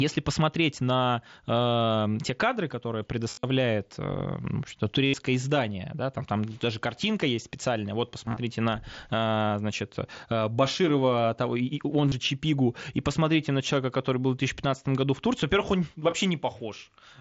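Speech over a Bluetooth headset, with concealed Bluetooth headset packet loss at 3.30–3.43 s, 5.05–5.14 s before "издание да там там", 8.26–8.37 s after "картинка есть специальная вот", 12.08–12.12 s after "того и он", and 16.11 s. Lost packets are patched by repeating recent waveform. The longer gaps turn briefly buzzy, then warble as real audio returns. The mSBC wideband link carries the sound, with light graininess on louder parts.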